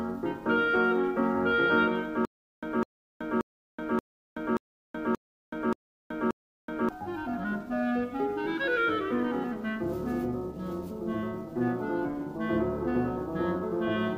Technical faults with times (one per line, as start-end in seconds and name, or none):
2.25-6.89 stutter with silent gaps